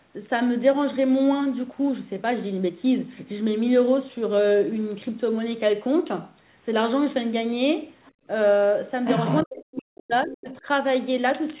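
Right around 8.04 s there's a brief, very faint scrap of another voice, maybe 35 dB under the talker. That's the other side's voice leaking through, most likely loudspeaker echo the canceller didn't quite scrub out of the mic. Straight after, from 8.12 to 8.26 s, the room tone ducks by up to about 25 dB for around 150 ms and then comes back. That's background gated by the echo canceller, which clamped the mic while it thought the speaker was playing. At 9.05 s the leak returns much stronger, only a few dB under the talker, and runs to 9.46 s. Then from 9.43 to 10.66 s you get speech suppressed in double talk. The talker's own voice sinks, at worst by something like 40 dB, for about a second in total, likely because the canceller couldn't tell them apart from the echo while both were talking, so it squashed everything. Inside that stretch, 10.23 to 10.52 s, a third bit of leaked far-end voice sits roughly 20 dB down. 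All of it rides on a narrowband call path with nothing above 4 kHz, which fits G.711.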